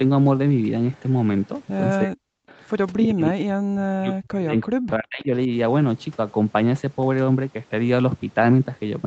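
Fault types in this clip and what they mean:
Echo leak: brief faint repeats of the speech arrive 324 ms late, about 40 to 25 dB down, likely residual loudspeaker echo; sound added, not removed.
Speech suppressed in double talk: the speech sinks by up to around 40 dB in stretches, likely echo control clamping during overlap; sound removed rather than added.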